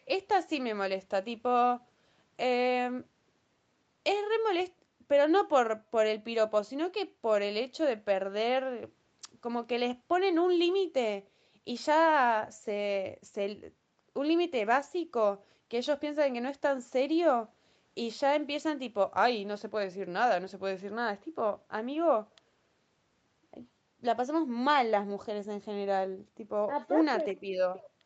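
No technical faults can be heard in this speech recording. It has passed through a call's microphone processing and codec path, and nothing reaches above about 8 kHz, which fits a wideband call setting.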